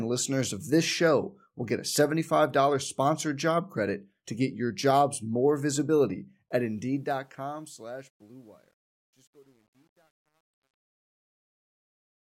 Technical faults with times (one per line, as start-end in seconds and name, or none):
6.49-12.24 truncation distortion on a fade